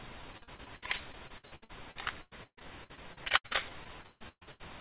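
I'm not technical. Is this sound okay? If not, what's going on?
No. From 0.32 to 4.6 s, repeated packet loss keeps dropping pieces of audio and patching them over, so about a third sounds choppy and robotic.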